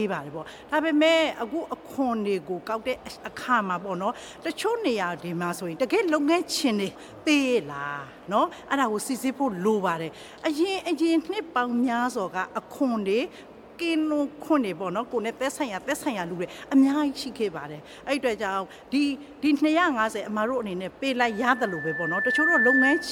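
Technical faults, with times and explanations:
21.19–23.11 s, loudspeaker feedback squeal: a pure tone at 1.8 kHz swells over roughly a second and a half and runs to the end of the clip, finishing somewhat louder than the sound around it. The microphone is hearing its own loudspeaker, and at 1.8 kHz the loop gain tops unity, so that tone keeps feeding itself. A spectrogram shows a single bright horizontal line thickening at 1.8 kHz, and the waveform's envelope swells steadily.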